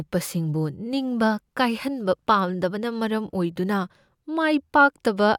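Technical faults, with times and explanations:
No technical faults detected.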